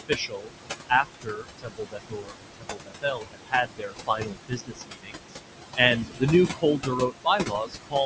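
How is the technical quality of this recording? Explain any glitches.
The recording is marked by heavy noise suppression, which both alters the background and eats into the speech itself.

Noise suppressor artifacts run through the whole clip. The room noise, sitting only about 6 dB below the speech, is pulled down by roughly 21 dB when no one is talking and swells back up under each phrase, so the background pumps in and out. The suppressor estimates which frequency bands hold steady noise and attenuates them frame by frame; with noise this close to the speech level, its decisions keep shifting, which produces that unstable residue.

Speech cut by the noise suppressor occurs in four stretches: 0.08 to 0.55 s, 0.89 to 5.37 s, 6.03 to 6.23 s and 6.53 to 7.95 s. Parts of the speech drop away, sounding swallowed or faint, by up to about 22 dB (about 17 dB in the short 6.03 s stretch). The long middle stretch loses around three seconds in total, the last about one second. 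The suppressor mistakes quieter speech energy for noise and turns it down along with the background. The call microphone processing, with nothing above 8 kHz, is working normally.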